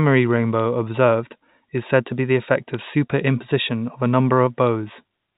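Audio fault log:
0.60 s, 2.74–2.79 s and 4.67 s, bit errors on a digital phone line: Sharp little ticks, the middle cluster right after "to be the effect". Flipped high bits turn single samples into spikes, at a very low error rate.
1.43 s and 3.41 s, audio missing between chunks: Short skips of roughly 20 ms just before "is said to be" and "of a", 2 s apart, likely lost where one processing chunk hands off to the next.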